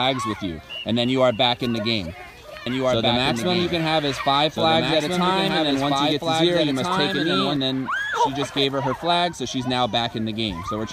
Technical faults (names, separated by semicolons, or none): doubled audio track